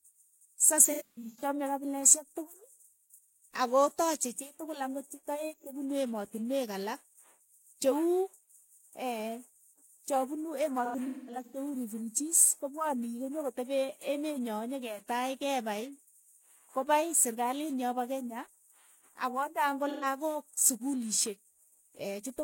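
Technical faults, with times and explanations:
0.84–1.43 s: AAC frame loss with concealment. About 0.34 s of audio drops out in bursts, the longest around 150 ms. The decoder refills from old spectrum, sounding smeared and noisy.
5.53–5.66 s: AAC frame loss with concealment, between "tukul ang'ot che toeek" and "punu emotinweek alak". About 43 ms is missing, which points to a single lost frame, heard as a brief phasey blur.
10.84–11.56 s: AAC frame loss with concealment. About 0.43 s is lost over 0.68 s, the longest gap around 200 ms. Repeated spectral guessing makes a smeared, noisy patch.
19.89–20.06 s: AAC frame loss with concealment. About 128 ms is missing. The decoder reuses the last good spectrum with scrambled phase, so the sound turns briefly smeared and hissy.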